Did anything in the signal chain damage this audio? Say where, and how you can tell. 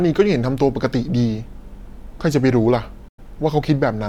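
Yes, a digital broadcast dropout at the reception stage: from 3.08 to 3.19 s the speech fades out over about 8 ms into true silence for 96 ms, which fits roughly three lost frames. A muting receiver does this; packet-loss concealment would fill the gap.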